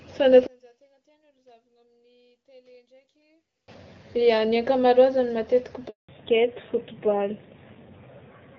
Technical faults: one channel inverted; handover gap; fallback to narrowband

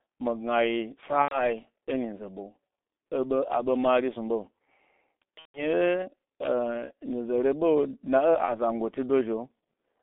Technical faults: G.723.1 codec; VoIP packet loss concealed by the speech codec

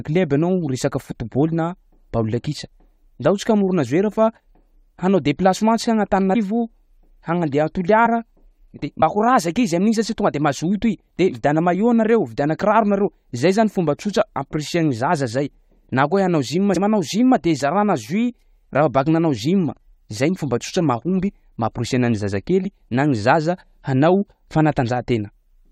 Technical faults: compressed frames skipped

